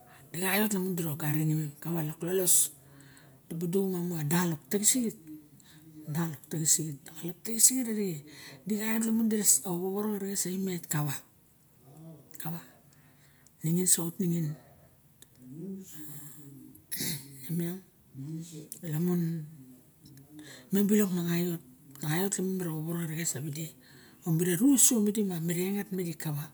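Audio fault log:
No audible faults found.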